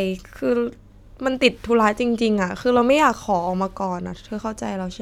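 No technical faults can be heard in this recording; the signal stays steady and intact throughout, with no breaks, distortion or other disturbances.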